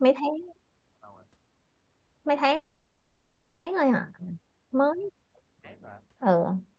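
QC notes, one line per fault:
2.55–3.68 s, call audio freeze: the sound stretches into a fading buzzy hiss for about 1.1 s, then resumes intact, likely packets stalling and draining the jitter buffer.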